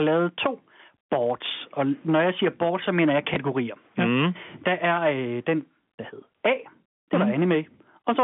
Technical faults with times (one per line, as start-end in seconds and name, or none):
0.00-8.23 hard clipping
3.34-3.36 packet loss with last packet repeated